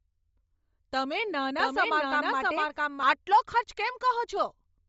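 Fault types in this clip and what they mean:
Bluetooth LC3 compression: A low-bitrate LC3 link with 10 ms frames likely strips detail, leaving speech grainy and breathy with nothing above 7.7 kHz.
Doubled audio track: A second, out-of-step copy is mixed in from 1.59 to 3.03 s, roughly as loud and about 0.7 s behind, starting and stopping abruptly.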